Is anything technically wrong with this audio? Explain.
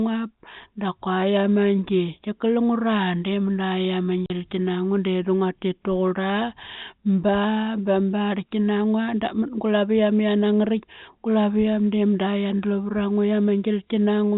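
Yes. Packet loss filled with silence at 4.26 to 4.30 s: about 40 ms went missing, which fits two 20 ms packets, and the receiver played silence there, leaving a hard-edged hole. The band stops at the 4 kHz limit of G.711 telephone coding.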